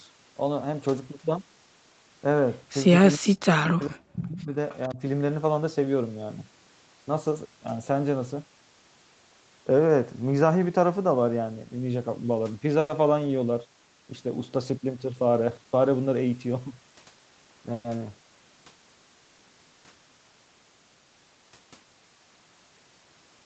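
Starting at 3.17 s and running to 4.56 s, the speech dips hard, at its worst by something like 40 dB, and comes and goes in pieces for about a second and a half in total. That's speech suppressed in double talk, most likely an echo canceller on the far end that couldn't tell its own talker from the loudspeaker signal while both sides were talking, so it pulled everything down together.

Right inside that stretch, from 3.81 to 3.86 s, there's a faint delayed scrap of the voice coming back about 460 ms late, sitting around 35 dB under the speech. Another one follows at 4.69 to 4.77 s, again roughly 460 ms behind and a bit louder at about 30 dB down. Both are echo leak, likely from a loudspeaker-side canceller letting some of its microphone pickup slip back into the call.

Then from 4.88 to 5.0 s the suppression returns briefly and more gently. The speech drops by maybe 15 dB for a short moment, the same double-talk ducking as before.

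At 12.79 to 12.91 s you get a short buzzy smear where the last sound is held and stretched for 100 ms before the speech picks up again with nothing lost, just pushed later. That's a call audio freeze, likely packets arriving late and the jitter buffer running dry.

From 15.13 to 15.79 s the speech runs hurried, at about 114% speed with the pitch unchanged. That's jitter buffer speed-up: the receiver trimmed out small pitch-period slices, around a tenth of a second altogether, to bring its delay back down.

Another call audio freeze hits at 17.73 to 17.86 s, with a 110 ms hold-and-fade fill before the speech carries on from where it stopped. Again the likely cause is a stall in packet delivery.

Throughout, nothing reaches above 8 kHz, which fits Opus at 32 kbps on the call path.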